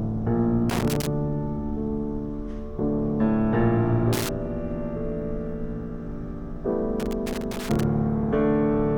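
A worn or dirty contact somewhere in the signal path is making and breaking as it shifts, chopping the audio into bursts of loose connector crackle with scratching, at 0.70 to 1.07 s, 4.13 to 4.29 s, and 7.00 to 7.83 s.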